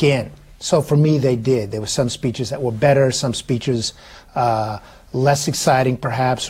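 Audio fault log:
No fault found in this clip.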